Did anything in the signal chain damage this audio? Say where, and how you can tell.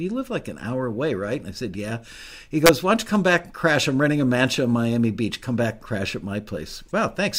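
Yes. Between 2.66 and 2.69 s the speech produces a harsh, abrupt crack on a loud peak, the signature of integer overflow in a fixed-point stage, most plausibly a gain or sample-format conversion step. The peak exceeded the integer ceiling by only about 1 dB, but instead of being held at full scale, those samples wrapped around to the opposite extreme. That full-range jump produces a snap far sharper than ordinary clipping, confined to that brief moment.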